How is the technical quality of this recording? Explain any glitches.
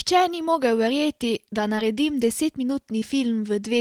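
Two brief glitches interrupt this speech recording, both short concealed packet loss. At 1.75 to 1.79 s and again at 2.99 to 3.03 s, the sound briefly smears and wobbles. About 20 ms of audio never arrived in time each time, so the receiver extended the preceding sound to fill the gap before blending back into the real signal.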